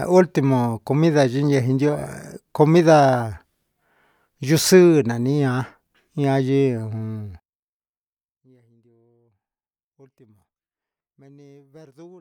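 Speech plays normally until about 7.40 s, and then in mono the level suddenly collapses by about 30 dB and stays down right through to the end at 12.21 s, leaving only a faint trace of the talker. That's most likely one channel inverted: with one side's polarity flipped, the centred speech both channels share cancels when they're summed, so only the small difference between them survives.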